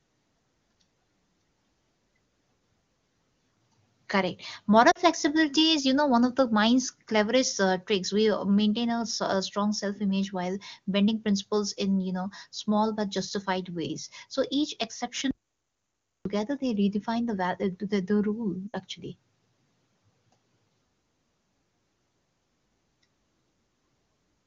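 At 4.91 s there's a quick warble from lost AMR speech frames, about 40 ms, consistent with two 20 ms frames. The decoder stretched the last good frame and faded it, and at 18.68 s a 60 ms run smears and dips the same way. Between them, from 15.31 to 16.25 s, comes an audio dropout to silence lasting about 0.94 s, complete silence with no room tone, likely a lost input, before the sound returns at "they redefine the".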